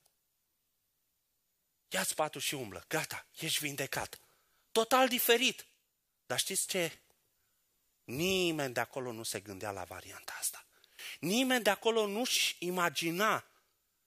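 No technical faults are audible.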